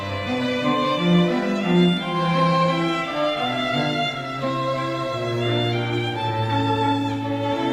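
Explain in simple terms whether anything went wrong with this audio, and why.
Listening closely, nothing went wrong here: no moment in the audio stood out as a problem.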